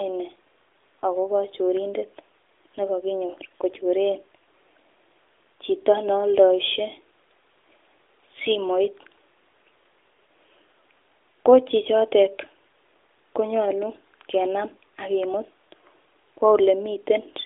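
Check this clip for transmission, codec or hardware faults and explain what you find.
No transmission, codec or hardware faults turn up anywhere in the clip. The speech comes through an AMR narrowband mobile codec path, with nothing above about 3.7 kHz, a line band of roughly 300 Hz to 3.6 kHz and only light codec colouring, which fits the 12.2 kbps mode.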